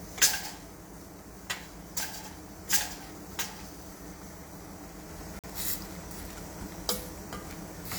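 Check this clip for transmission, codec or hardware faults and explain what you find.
One transmission fault can be heard in this everyday-sound recording.

Corrupt frame muted, from 5.39 to 5.50 s: the audio drops to silence abruptly for about 0.11 s and then carries on. Bits inside the compressed stream were damaged, the decoder rejected the affected frames, and the player filled their slot with silence rather than output garbage. The gap's length points to two consecutive frames being lost. Because the silence replaces the frames one for one, the timing after the hole stays intact.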